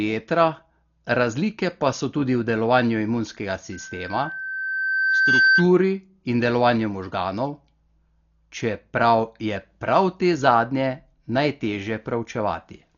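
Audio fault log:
throughout: Dolby Digital compression, likely. The audio is dull, with nothing above 6.9 kHz and a rough, fluttering noise around tonal parts, where starved bands are filled with noise. The heavy damage fits about 40 kbps. A spectrogram shows a hard ceiling at 6.9 kHz and speckled, patchy energy beneath it.
3.72–5.72 s: loudspeaker feedback squeal. A single 1.6 kHz tone swells over about two seconds to roughly 5 dB above the speech, as the microphone keeps re-amplifying its own loudspeaker at that frequency. A spectrogram shows one bright horizontal line strengthening, and the waveform envelope climbs steadily.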